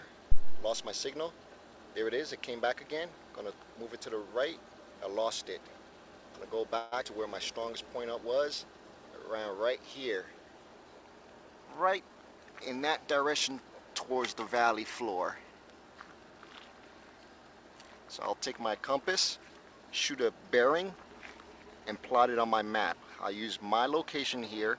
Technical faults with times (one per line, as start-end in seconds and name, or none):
0.32-0.72 phantom power thump
6.78-6.94 call audio freeze
7.04-7.06 skip ahead
7.53-7.84 jitter buffer slow-down
11.62-12.71 jitter buffer speed-up